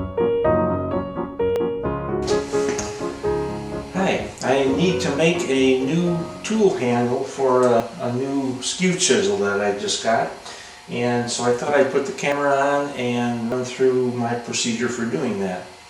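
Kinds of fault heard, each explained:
Dropped buffer (overrun): The sound skips forward with no gap at 1.56, 7.80, 12.32 and 13.52 s. The likely cause is a capture program that failed to collect its samples before the hardware overwrote them. The lost piece is gone, and the audio on either side is butted together. The first skip loses about 20 ms. The later three lose around 70 ms each.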